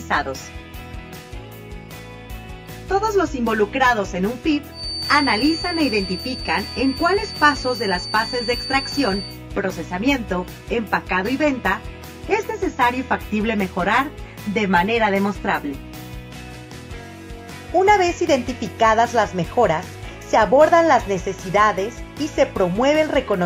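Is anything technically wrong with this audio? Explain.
Yes, there's a feedback whistle from 4.69 to 9.40 s: a thin, steady tone at 4.6 kHz sitting roughly 10 dB under the sound and slowly swelling and fading in level. Likely the speaker-to-mic loop is hovering right at the edge of feedback without tipping over.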